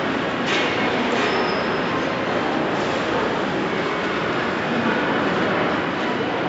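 No technical faults are audible.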